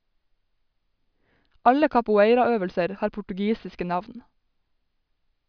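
Speech recording with no audible technical faults.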